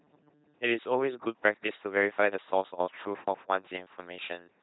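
It's a speech clip run through an LPC-10 vocoder for its whole length, and the damage is heavy. There's nothing above 3.9 kHz. The voice has that flat, buzzy robot quality because the coder throws away the real waveform. It rebuilds each moment from a short all-pole vocal tract filter driven by either a pulse train or noise, with nothing in between. The thin, mechanical result fits a 2.4 kbit/s coder.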